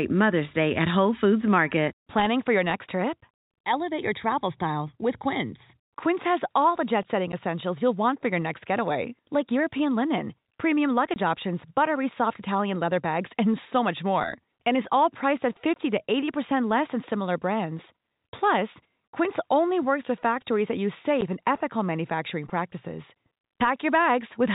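Packet loss filled with silence chops the speech at 7.32 s after "all the jet setting", 11.14–11.16 s after "linen premium", 15.74–15.76 s after "is all priced at", and 21.21 s. Holes of 10 and 20 ms suggest lost 10 ms packets.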